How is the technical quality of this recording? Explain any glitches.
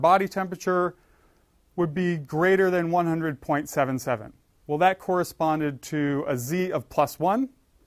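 No technical glitches can be heard anywhere in the recording, and the signal stays steady and intact throughout.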